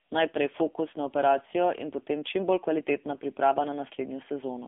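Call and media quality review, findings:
AMR narrowband mobile codec throughout: speech confined to 250 Hz–3.5 kHz, nothing above 3.6 kHz; heavy buzzy, synthetic coding damage, consistent with a low 6.7 kbps mode.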